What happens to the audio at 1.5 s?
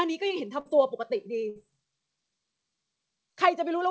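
From 1.49 to 1.58 s there is a burst of packet loss. Concealment stretches and fades the preceding sound, then playback resumes with 60 ms missing.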